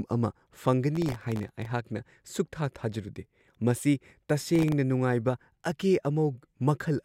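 A gritty, tearing crackle rides on the speech from 0.95 to 1.66 s, and a shorter burst of the same grit returns from 4.55 to 4.72 s. This is processor overload crackle. The processor fell behind and repeatedly missed the deadline for its very short buffers, each well under a millisecond. Each miss replayed a sliver of old audio with hard edges. Dozens of misses pile up in the first burst and only a handful in the second.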